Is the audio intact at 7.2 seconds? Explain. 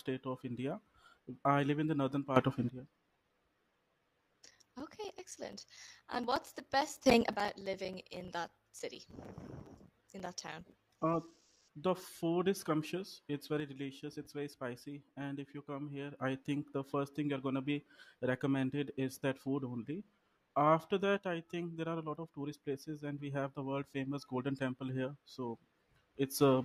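No. A sudden gain jump runs from 7.06 to 7.36 s: the level steps up by about 12 dB instantly, likely from a gain setting applied without a ramp. Unlike a naturally louder sound, the background noise jumps by the same amount.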